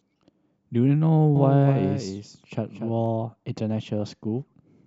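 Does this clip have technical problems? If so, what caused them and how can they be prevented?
Yes. There's a doubled audio track from 1.36 to 3.06 s. A dry second copy trails about a fifth of a second behind, around 10 dB down, and cuts in and out abruptly. That's likely a slower second capture path leaking into the mix. Make sure only one input path feeds the mix.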